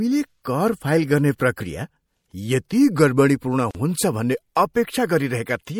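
Throughout, MP3 compression, likely at around 64 kbps, starves the encoder of bits, leaving the speech plainly watery and swirly, with smeared consonants. From 3.71 to 3.75 s, a gap at a join of encoded pieces, where separately encoded sections were spliced untrimmed, drops in a gap of about 41 ms, its edges smeared so the silent part is shorter, before the speech resumes.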